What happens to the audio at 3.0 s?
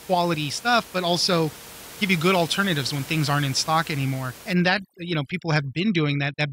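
At 3.0 s the speech runs through intact, with only the room noise sitting about 19 dB beneath it.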